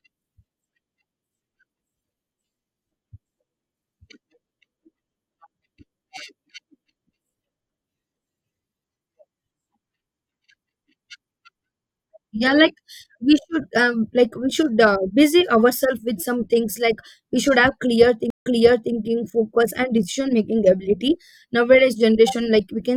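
At 18.30 s the connection drops and the player has to reconnect and start a new decoder partway through the stream, a stream reconnect that runs until about 18.94 s. The speech cuts out for 148 ms. When it returns, the server has resent a burst, so playback resumes about half a second earlier than where it stopped, 491 ms back. The listener hears a gap followed by a short stretch of speech repeated.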